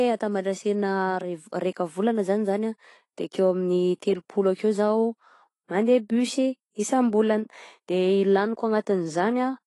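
Speech with AAC compression damage throughout, likely from low-bitrate AAC-LC around 32 kbps: nothing above 11.5 kHz, a dull, smeared top and a fizzy, warbling texture on sibilants.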